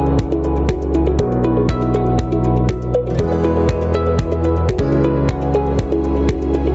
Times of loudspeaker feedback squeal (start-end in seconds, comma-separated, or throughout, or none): none